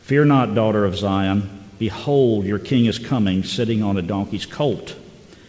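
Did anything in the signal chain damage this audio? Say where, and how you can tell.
No, nothing in the chain damaged this audio: it passed through a call path, and the missing content above 8 kHz fits a G.722 wideband codec working as designed rather than any fault.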